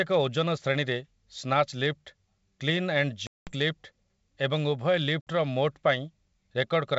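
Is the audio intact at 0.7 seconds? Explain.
Yes, the audio is intact at 0.7 seconds, with the speech carried cleanly through G.722 wideband telephone coding at 64 kbit/s.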